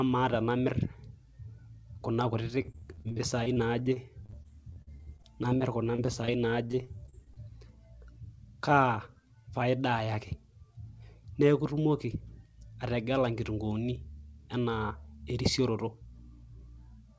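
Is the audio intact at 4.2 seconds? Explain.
No. At 4.2 s, repeated packet loss runs from 2.62 to 6.30 s. Thirty short gaps, up to 46 ms, are patched by extending the previous sound. It sounds choppy and robotic.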